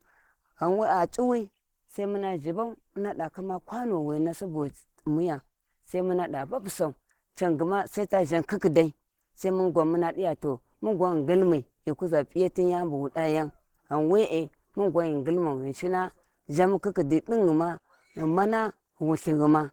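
From start to finish the speech sounds hoarse and muffled, with a grainy, rough texture that is plainly audible on every phrase. The top end still reaches about 20.2 kHz, but the detail there is filled in rather than resolved. This is likely Opus compression at a low rate, consistent with around 16 kbps. At that rate the encoder runs in its hybrid speech mode, trading fine spectral detail for noise-filled bands.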